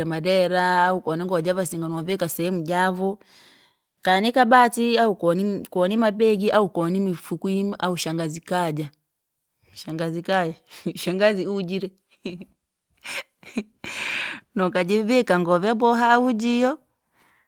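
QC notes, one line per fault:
No faults heard; nothing to flag on this speech recording.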